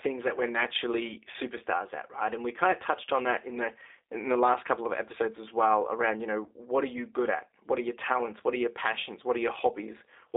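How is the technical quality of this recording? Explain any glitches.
The recording is limited by a low-bitrate phone codec and has three brief dropouts.

Throughout, G.729 codec damage is plainly audible. The 300 Hz to 3.7 kHz band and 8 kbit/s model-based coding make the speech muffled, rough and slightly synthetic.

At 1.33–1.36 s, 6.44–6.48 s and 8.39–8.41 s, there is VoIP packet loss concealed by the speech codec. The decoder extrapolates over roughly 10, 20 and 10 ms of missing audio, producing a short buzzy or noisy fading smear and a weakened onset as it recovers.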